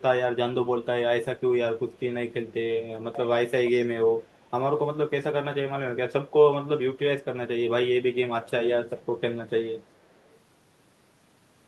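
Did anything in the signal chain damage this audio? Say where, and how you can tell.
Yes. A faint, delayed copy of the speech trails behind the talker twice: a short scrap from 3.12 to 3.29 s sitting about 15 dB below the direct speech, and a longer, much weaker stretch from 4.08 to 4.51 s at roughly 35 dB down. Both copies lag by about 0.4 s. The stage is call processing, and the cause is most likely an echo leak: the far end's loudspeaker output reached its microphone, and its echo canceller let some of it through and back.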